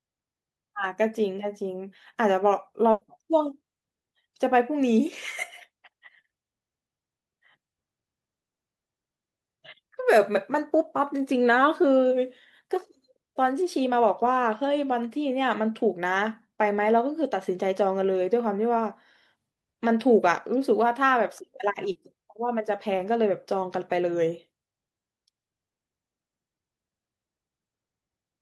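A speech recording with two packet-loss faults. From 2.91 to 3.03 s there is a burst of packet loss: about 100 ms of audio never arrived, so the receiver extended the last sound and faded it, producing a held buzz or fading hiss rather than silence. When the speech returns, that 100 ms of content is gone. What sets it apart from the later fault is its length: the stretched, decaying sound lasts longer before the speech jumps ahead. At 21.91 to 21.97 s there is a short concealed packet loss. About 40 ms went missing and was filled by continuing the preceding pitch or noise, then blended back into the real signal. It comes across only as a brief smear or wobble, possibly swallowing a consonant. Unlike the earlier burst, it is just a momentary blur.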